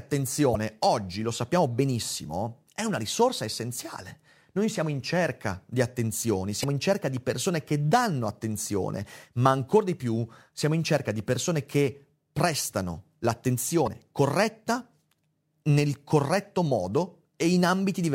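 Brief glitches break into the speech at 0.51–0.56 s, 6.60–6.64 s and 13.83–13.88 s, each about 44 ms long. That is damaged data in a compressed stream: corrupted bytes make the decoder misread those frames and lose sync until it finds the next frame header.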